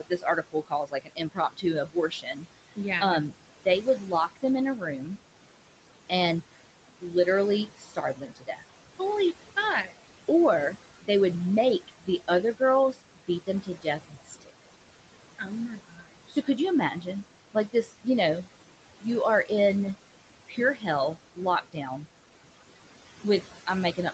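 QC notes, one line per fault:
Throughout: noise suppressor artifacts. The room noise is pulled down by about 18 dB between phrases and rises back under the speech. A spectrogram shows noise floor gaps pumping in step with the speech.
0.0–19.51 s, 20.48–21.87 s, 23.24–24.13 s: speech cut by the noise suppressor. Quiet consonants and word endings are treated as noise and turned down, by up to about 19 dB, 17 dB and 14 dB respectively, so they sound swallowed. Roughly four seconds in total are affected in the first span and only a fraction of a second in the second. On the waveform, phrase tails collapse abruptly, and the spectrogram shows high-frequency consonant energy missing, all within a band that stops at 8 kHz.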